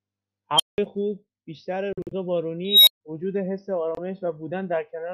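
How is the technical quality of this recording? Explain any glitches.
The recording has two kinds of glitch, each occurring twice: a runaway filter and what sounds like wireless packet loss.

Unstable filter, at 0.56 to 0.78 s and 2.65 to 3.01 s: a recursive filter in the chain went unstable, so its feedback amplified itself instead of decaying. The first time, a squeal around 3 kHz swells to clipping within about 36 ms, then the output overflows and cuts to silence for about 0.19 s. The second squeal, near 4 kHz, builds more slowly over about 0.22 s before dropping into about 0.14 s of silence.

Bluetooth dropout, at 1.93 to 2.13 s and 3.95 to 3.99 s: these are likely Bluetooth dropouts, where audio packets reached the headphones too late and were discarded. At 1.93 s, roughly 116 ms of speech is missing in several short holes spread over about 0.19 s, the longest about 46 ms, which suggests a handful of lost frames. 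At 3.95 s there is a single 23 ms gap. In both places the speech resumes further on, as if it had kept playing.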